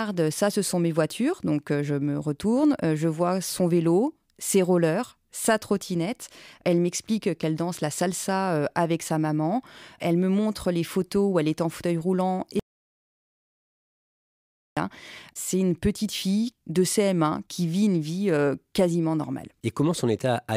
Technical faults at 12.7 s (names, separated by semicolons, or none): audio dropout to silence